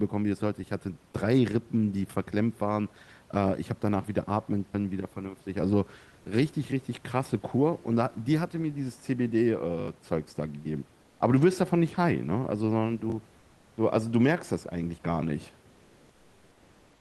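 At 4.66 to 4.74 s a repeated buffer produces a short stutter: one 20 ms slice of the speech plays five times in a row, with a hard join at each repeat. Fresh audio failed to arrive, so the device looped what it already held, and around 70 ms of real sound is lost. On the waveform this shows as identical 20 ms blocks tiled end to end. The spectrogram shows a run of copied vertical strips with sharp edges.

From 11.03 to 11.19 s, roughly 160 ms, the real room background gives way to a flat, textureless hiss about 2 dB quieter. The likely cause is discontinuous transmission, with the receiver filling a pause in the speech with comfort noise that only loosely matches the background. On the spectrogram the fine grain of the background smooths into an even wash. The band above about 12 kHz stays empty, as it does throughout the Opus call path.

At about 13.1 s a second repeated buffer replays a single 20 ms block once. 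It is heard as a brief click-like hiccup, and about 20 ms of audio is lost. The waveform shows one duplicated block with an abrupt seam.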